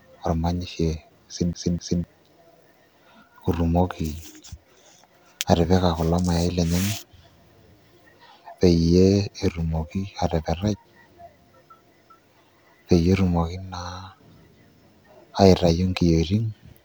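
Speech recording with a CD stuck on one turn from 1.53 to 2.04 s: a 254 ms loop repeats twice, with brief mutes at each laser jump.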